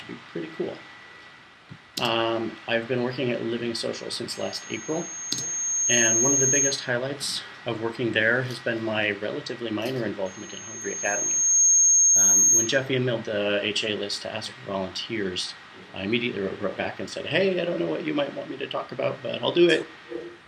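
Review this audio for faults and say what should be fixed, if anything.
There's loudspeaker feedback squeal twice, from 4.32 to 6.91 s and again from 10.25 to 12.86 s. Both times a single tone at 6.5 kHz swells over roughly a second and a half until it sits around 10 dB above the rest of the sound. That's a mic hearing the speaker it feeds, with the loop gain topping one at that frequency. To prevent it, drop the gain or move the mic out of the speaker's throw, and notch 6.5 kHz if it keeps ringing.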